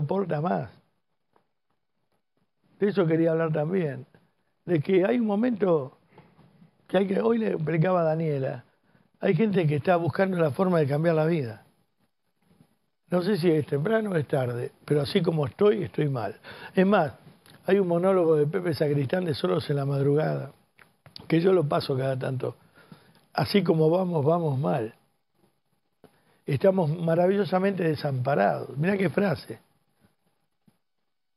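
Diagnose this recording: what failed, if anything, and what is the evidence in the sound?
A de-emphasis filter was applied wrongly at the playback stage, cutting treble from audio that carried no matching pre-emphasis. From 0.0 to 9.51 s the top end slopes smoothly away, about 10 dB down at 10 kHz relative to 1 kHz, leaving the sound dull and muffled.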